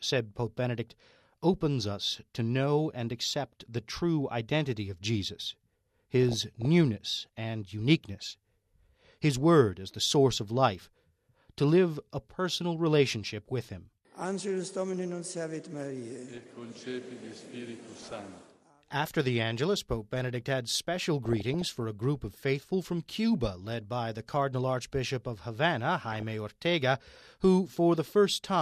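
DAB burbling bubbles up at 6.23–6.65, 8.19–8.32, 16.29–16.38, 17.94–18.16, 21.25–21.82 and 26.12–26.30 s. Weak reception let bit errors through, corrupting MP2 sub-bands into short blips of noise.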